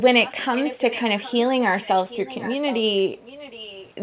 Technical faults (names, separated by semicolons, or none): echo leak